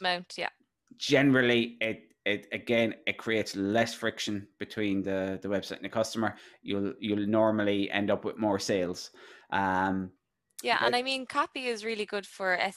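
No technical faults can be heard in this audio.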